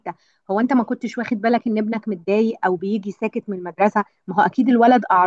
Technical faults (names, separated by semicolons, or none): none